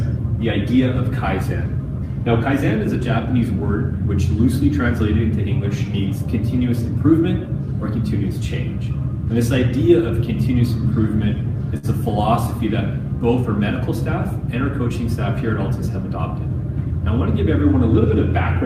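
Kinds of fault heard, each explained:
Short stall from a late packet: at 11.77 s a packet arrived late and the jitter buffer ran dry, so the receiver held the last sound for about 57 ms before resuming exactly where it left off. Nothing is skipped, and everything after is shifted 57 ms later. On a spectrogram the frames from 11.77 to 11.86 s repeat as flat, smeared horizontal bands with a faint buzz texture. The waveform shows a short looped, slightly dipped stretch there.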